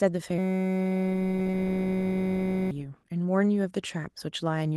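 From 0.38 to 2.71 s the speech gives way to a flat, steady buzz at about 188 Hz. That's a system hang loop: playback froze and the hardware kept recycling one 5.33 ms slice, which fits a 256-sample buffer, so around two seconds of speech are lost.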